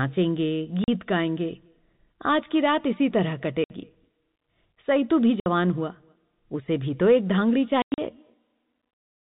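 Packet loss filled with silence punches holes in the speech at 0.84 s (40 ms), 3.64 s and 5.4 s (60 ms each), and 7.82 to 7.98 s (140 ms in bursts). The gap lengths fit 20 ms packets.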